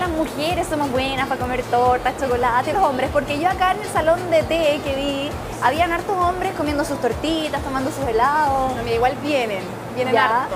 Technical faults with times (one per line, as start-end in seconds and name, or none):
2.72-2.75 compressed frames skipped